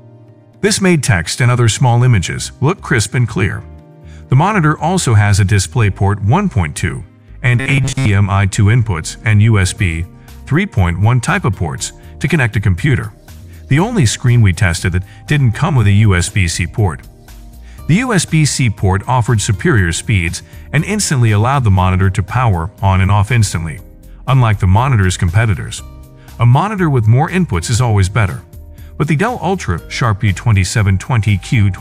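From 7.60 to 8.09 s the sound turns into a rigid metallic buzz near 134 Hz. This robotic sound is likely from repeated short buffers of about 7.5 ms, with most of the audio replaced. The fixed pitch distinguishes it from a dropout or gentle smearing.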